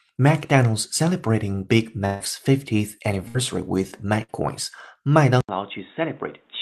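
Three bursts of packet loss come first, at 2.05 to 2.22 s, 3.28 to 3.36 s and 4.23 to 4.30 s. In each, the receiver had no audio to play, so it stretched the last sound into a held buzz or hiss that fades. The first gap loses about 140 ms and the other two about 60 ms each. Rather than going silent like a plain dropout, the sound smears and then jumps ahead, picking up with a piece missing.

At 5.41 s there is a brief silence of about 80 ms, and from then to the end the sound is duller and quieter. Nothing is left above 3.8 kHz, the level falls by about 10 dB, and a new noise floor sits about 30 dB below the signal. The likely cause is the input switching to a poorer device. A codec narrowing its band would not bring a gap, a level drop and different background noise all at once. Before the switch, the call path carries content up to 12 kHz.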